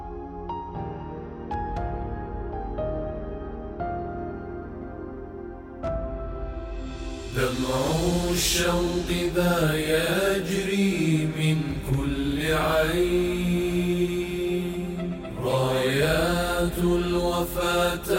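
Nothing in this audio stands out as a technical problem, so there's really nothing here to flag.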